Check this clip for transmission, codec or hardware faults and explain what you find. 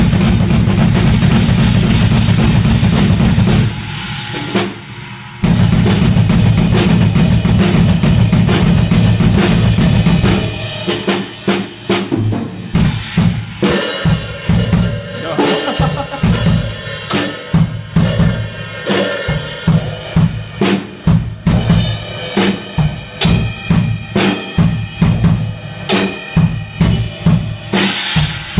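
I find no faults in this clip.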